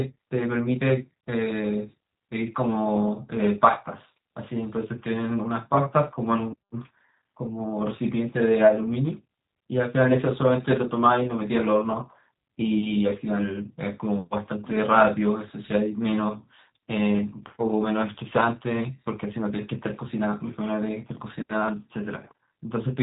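Throughout the clip, the speech has been squeezed through a low-rate VoIP coder, and the sound fits the G.729 codec at about 8 kbit/s. Rather than carrying the waveform itself, this coder rebuilds each short frame from a model of the vocal tract, a pitch estimate and a handful of pulses. Nothing survives above 3.8 kHz, so sibilants and airy detail are gone, and the voice comes across plainly rough, buzzy and slightly synthetic.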